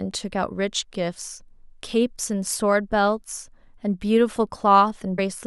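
A brief glitch cuts into the speech from 2.52 to 2.55 s, and a second one from 5.14 to 5.19 s, each lasting only a few hundredths of a second. Both come from damaged data in a compressed stream: corrupted bytes at those points leave the decoder unable to read the frames correctly. It loses sync and has to hunt for the next valid frame header, and that disruption is heard as the short glitch.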